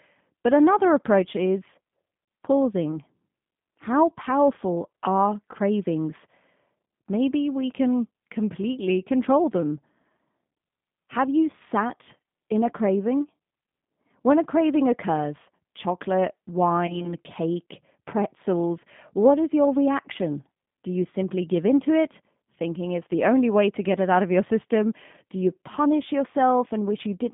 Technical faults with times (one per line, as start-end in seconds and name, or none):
0.00-27.33 G.729 codec
2.92 VoIP packet loss concealed by the speech codec
16.87-17.14 VoIP packet loss concealed by the speech codec